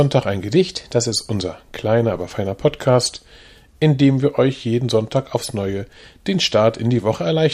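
From 0.56 to 1.12 s the whole sound jumps about 6.2% faster and roughly a semitone sharp (104 cents), then snaps back to normal. That's a drift correction step, likely clock-matching software briefly changing the playback rate to rebalance its buffer.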